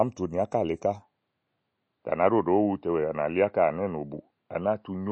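From the start, the speech carries plainly audible codec damage, likely from MP3 compression. Nothing reaches above 8.3 kHz. Weak frequency lines drop in and out between frames, giving a watery, swirly texture. The damage fits a low bitrate of about 32 kbps.

At 1.02 s the band narrows again, and it stays that way to the end. Nothing now sits above 5.1 kHz, so the speech loses more of its top end. There is no gap at the change, and the level holds roughly steady. The likely cause is an input switched to a poorer device. That device adds its own noise, but it sits far below the speech.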